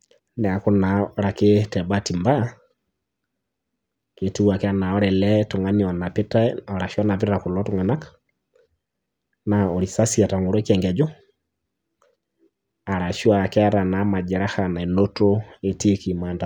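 Listening closely to this speech recording, nothing stood out as a technical problem at any point.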